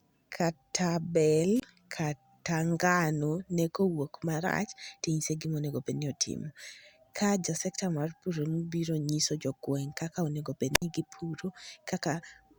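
After "kata bel", a wireless microphone squelch dropout runs from 1.55 to 1.62 s, muting for 24 ms. A second, after "kaka onego", runs from 10.73 to 10.82 s with a 62 ms mute. As the radio signal fades, hiss swells before the receiver's squelch closes. That rising static, rather than an abrupt clean gap, sets it apart from a digital packet dropout.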